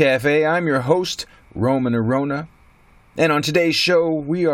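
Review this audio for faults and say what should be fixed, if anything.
No faults can be heard in the speech recording. Nothing here needs fixing.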